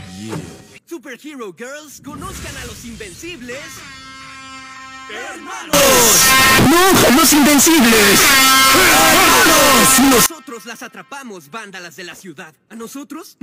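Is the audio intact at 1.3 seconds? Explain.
Yes, the audio at 1.3 seconds is intact, with no dropout, click, distortion or other fault at that moment.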